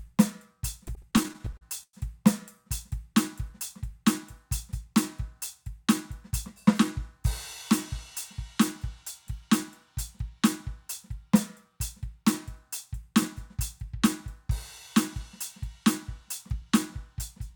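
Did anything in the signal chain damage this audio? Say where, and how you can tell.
Yes. At the network stage, packets arrived late and the jitter buffer ran dry fourteen times between 0.85 and 1.95 s, causing repeated stalls (stutter). The receiver held and faded the last music, up to 101 ms per gap, so nothing is lost but that stretch drags.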